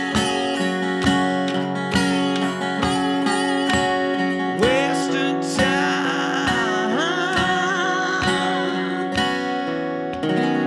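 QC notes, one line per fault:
No technical faults turn up anywhere in the signal, which holds steady and unbroken from its first moment to its last.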